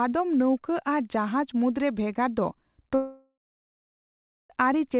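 Speech, carried over a narrowband call path whose G.711 A-law coding at 64 kbps leaves nothing above 4 kHz. Right after "ᱨᱮ ᱵᱷᱮᱜᱟᱨ ᱫᱚ" at 2.95 s, the sound smears into a fading buzz, then roughly 1.15 s of near-silence until 4.50 s, when audio resumes with about 1.55 s missing. This is likely a long network dropout, with the receiver's concealment stretching the last sound before giving up.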